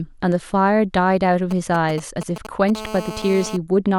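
From 1.51 to 2.70 s, GSM signalling bursts break into the speech: a galloping dit-dit-dit of brief raspy buzzes, roughly 10 dB below the voice. A nearby 2G phone is exchanging short groups of radio bursts with the network, and the audio circuitry rectifies them into sound. Because the transmission comes in clumps rather than continuously, the 217 Hz pulsing is heard only in short packets separated by gaps. That stuttering rhythm separates it from the steady call buzz that follows.

From 2.75 to 3.57 s the phone is transmitting continuously, as in a call, and the result is a GSM phone buzz: a hard, harmonically rich rasp at 217 Hz, about 12 dB below the speech, holding steady with no gaps and no relation to the voice. Each of the phone's 217 bursts per second is rectified into a pulse. The uninterrupted, nearly steady buzz marks it as call-state interference rather than the intermittent signalling pattern heard earlier, and its fixed, raspy, pulse-rich tone sets it apart from a smooth mains hum.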